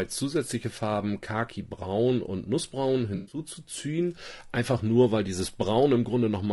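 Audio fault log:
throughout: low-delay AAC compression. The speech is rough and grainy across the whole clip, with hiss sitting between the voice harmonics and a thin, synthetic-sounding top band. The likely cause is AAC-ELD coding at a rate that fits about 32 kbps: its short frames resolve pitch harmonics poorly and spend bits quickly. Unlike a dropout, the damage is steady and never interrupts the signal, so it reads as a codec texture rather than an event.
3.15–3.39 s: AAC frame loss with concealment. For roughly a quarter of a second the voice turns smeared, noisy and phasey as the decoder rebuilds missing audio from the last good spectrum. About 140 ms of sound is missing, scattered over 160 ms, which points to around seven lost frames, with the longest gap near a tenth of a second. Unlike the steady coding roughness, this is a brief local patch.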